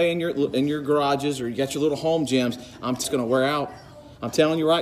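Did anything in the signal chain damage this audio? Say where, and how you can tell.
Yes. At 3.04 s there is a single brief glitch from damaged data in a compressed stream, a codec or storage fault. Part of the encoded data was corrupted. The decoder misread those frames, lost sync, and resumed at the next valid frame header.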